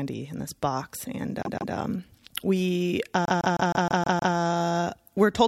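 Speech with repeated frames in two places. From 1.43 to 1.74 s the same roughly 0.16 s block plays twice more, and from 3.25 to 4.35 s it plays seven extra times, adding about 0.31 s and 1.1 s. The 157 ms block fits a run of six compressed frames written again, so the decoder replays it as a stutter. On a waveform the same shape repeats side by side; on a spectrogram identical patterns tile at 157 ms spacing.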